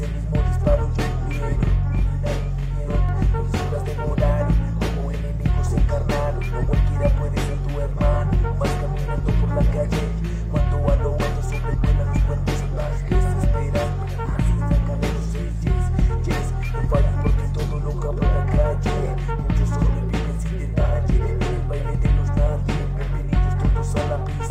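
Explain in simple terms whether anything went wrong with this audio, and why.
Between 1.64 and 3.09 s the sound doubles, with a second copy trailing the first by about 43 ms at equal loudness. This is a channel delay (doubling): one channel arrives late, likely from a 2048-sample buffer, and mixing both channels together exposes the lag.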